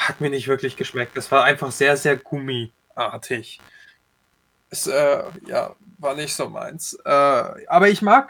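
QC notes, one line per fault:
throughout: computer activity noise. A faint buzz pulsing at about 70 Hz, around 35 dB below the speech. Computer load shifts the shared audio ground.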